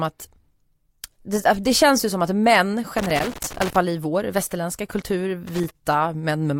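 From 2.98 to 3.76 s, and again from 5.47 to 5.70 s, the speech breaks into loose connector crackle: an irregular scratching burst where a worn or dirty contact keeps making and breaking as it shifts, chopping the signal. On a waveform these spans show ragged dropouts and sharp spikes. A spectrogram shows scattered broadband vertical streaks cutting across the speech harmonics.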